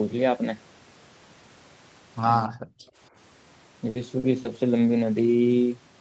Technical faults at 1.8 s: none

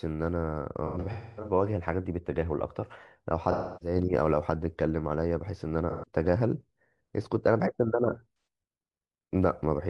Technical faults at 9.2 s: none

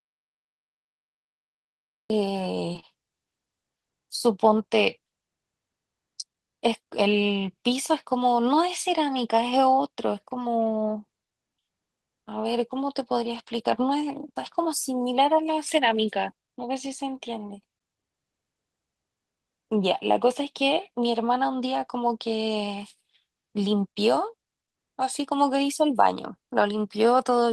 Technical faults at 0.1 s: audio dropout to silence

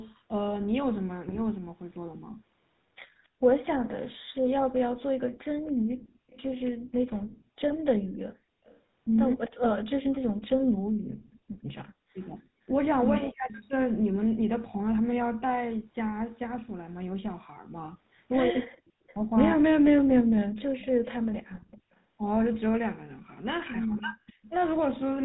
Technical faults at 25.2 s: GSM full-rate codec

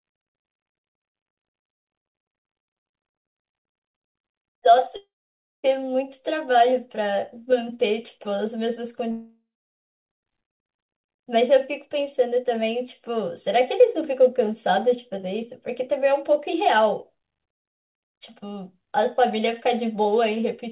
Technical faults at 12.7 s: none

